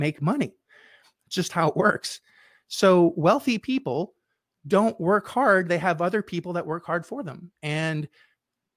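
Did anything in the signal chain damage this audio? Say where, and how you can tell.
No, nothing in the chain from capture through playback left an audible mark on this speech recording.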